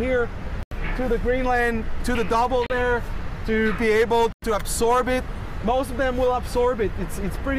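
Bluetooth stalls, likely from interference holding up packets until the headphones' buffer emptied, leave three dropouts to silence: at 0.63 s for 85 ms, at 2.66 s for 35 ms, and at 4.32 s for 99 ms. Each time the sound resumes abruptly after the gap.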